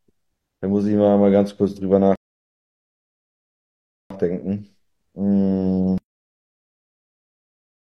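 At 2.16 s a rebuffering stall occurs: the player exhausts its downloaded audio and halts until more data arrives. The speech drops abruptly to silence, then resumes at 4.10 s exactly where it left off, nothing missing, about 1.95 s added.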